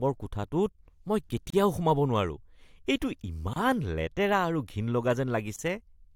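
At 1.50, 3.54 and 5.56 s the speech drops out briefly, about 32, 27 and 27 ms, roughly every 2 s. That's a gap at a join of encoded pieces: separately encoded chunks were butted together with their startup delay and end padding left in, so silence cuts in and the speech resumes right where it stopped.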